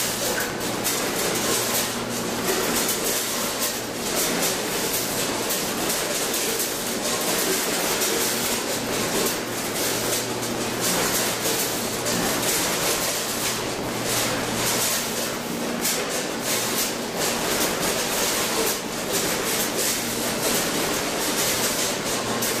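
Buffer tearing runs through the whole clip. The program filling the ring buffer and the hardware draining it have drifted out of step and now cross inside every period. A small slice of each buffer, around 4 percent, still holds audio from roughly 20 ms earlier, with a hard edit at both ends. Those joins repeat at 100 Hz, which points to a 10 ms buffer period. They produce a steady robotic buzz that sits on the sound and disappears whenever the signal goes quiet.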